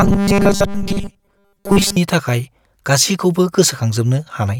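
From 0.01 to 1.97 s, audio likely arrived too seldom and short buffers were replayed much of the time, causing robotic sound from repeated short buffers: a rigid 200 Hz buzz.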